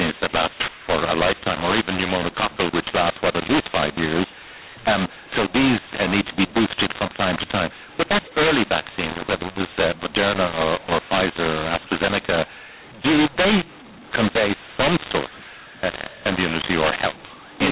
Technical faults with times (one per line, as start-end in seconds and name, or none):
0.00-17.71 mu-law and A-law mixed up